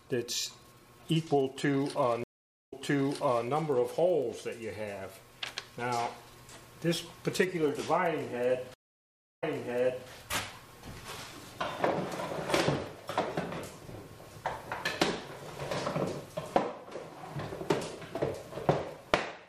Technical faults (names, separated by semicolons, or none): stream reconnect